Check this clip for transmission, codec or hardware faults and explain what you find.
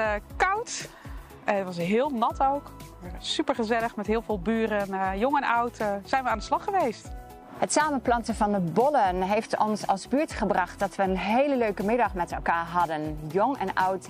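No transmission, codec or hardware faults detected.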